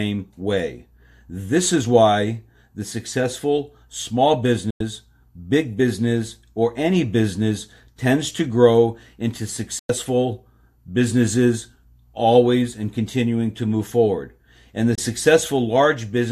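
Speech snaps to silence for about 0.1 s at 4.70 s after "why the successful small" and 9.79 s after "tends to grow into", then 0.03 s at 14.95 s: digital broadcast dropout, the receiver muting over lost frames.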